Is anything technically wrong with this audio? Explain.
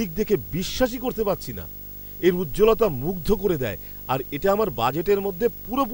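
Yes. Throughout the speech there is video or display buzz: a screen or video cable is coupling into the audio path, adding a raspy 50 Hz field-rate buzz with hash above it and a thin whine at 15.6 kHz from the line scan, sitting roughly 15 dB below the speech.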